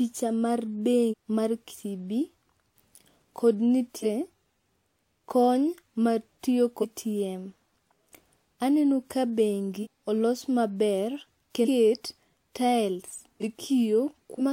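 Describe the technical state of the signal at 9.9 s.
Right around there, between 9.82 and 9.87 s, you get compressed frames skipped. A run of 46.4 ms frames never got decoded, which sounds like roughly seven of them, so something like 0.4 s of speech just vanishes.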